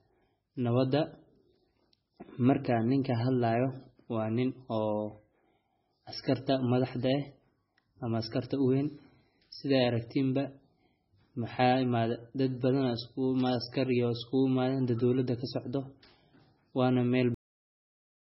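Across the whole speech clip there is nothing above 5.6 kHz, and the remaining band sounds watery and swirly, with weak detail flickering in and out and smeared attacks. This is likely heavy MP3 compression at a very low bitrate, around 16 kbps. Unlike a plain low-pass filter, the loss shifts from moment to moment.

At 17.34 s the audio is cut off mid-sound and drops straight to digital silence that lasts to the end. This is a cut-off end, where the final buffers were never played. Unlike a fade-out, there is no decay, and unlike a dropout, the sound never comes back.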